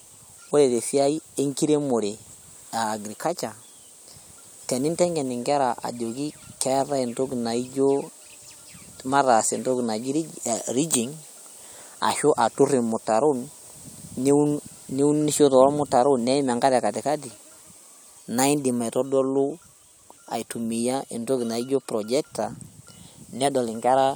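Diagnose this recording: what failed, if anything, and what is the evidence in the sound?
Nothing failed; no faults heard.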